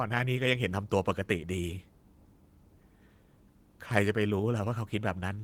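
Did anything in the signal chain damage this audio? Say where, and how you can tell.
No, nothing damaged this audio.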